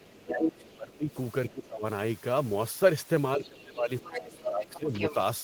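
Other side's voice leaking through appears from 0.00 to 1.67 s, very faint and far below the talker, then again from 4.01 s to the end, now nearly as loud as the talker. It is likely loudspeaker playback that the echo canceller failed to remove from the microphone.

Speech suppressed in double talk runs from 0.07 to 1.85 s and from 3.36 to 4.93 s. The talker's level dips by as much as about 20 dB, in pieces totalling roughly a second and a half in each span. The likely cause is the echo canceller mistaking overlapping talk for echo and turning everything down.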